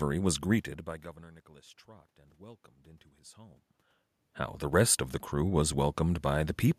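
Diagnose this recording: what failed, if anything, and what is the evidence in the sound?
Nothing in the chain failed.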